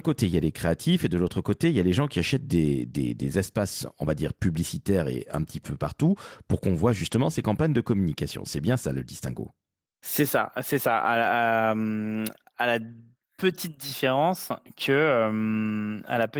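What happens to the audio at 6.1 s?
Nothing goes wrong at 6.1 s; the speech continues intact there, carrying only the light, steady colouring of its Opus voice compression.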